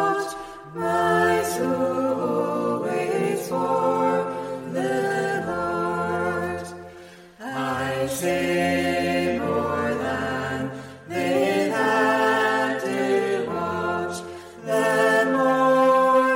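No technical faults are audible anywhere in the recording.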